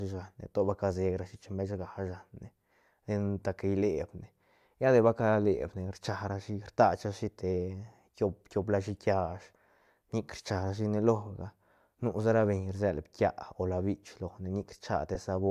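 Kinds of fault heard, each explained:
Lost LE Audio frames: Right near the end of the speech, around 15.15 to 15.18 s, there's a tiny blip where the sound turns briefly into a smeared, noisy patch instead of clean speech. That fits a single 10 ms LC3 frame going missing over the Bluetooth link, with the decoder filling the hole by replaying the previous frame's spectrum with scrambled signs, so the gap gets papered over with a short burst of hiss-like texture rather than a hard dropout.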